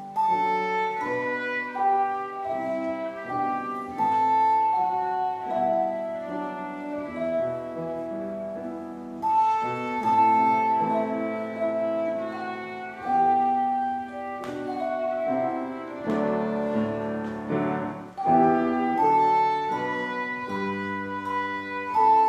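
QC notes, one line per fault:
Nothing to flag here; I didn't hear a single problem anywhere in it.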